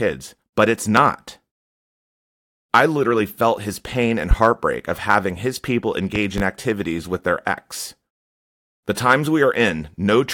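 At 0.97 to 1.01 s a loud pop jumps roughly 20 dB above the speech, and another follows at 4.31 to 4.35 s, between "felt his pain and" and "of having his people", roughly 15 dB up. From 6.16 to 6.42 s, before "activities with their ex", comes a softer double pop. Each is likely a voltage spike from a switch or static, with speech continuing underneath, seen as tall waveform spikes and thin full-height spectrogram stripes.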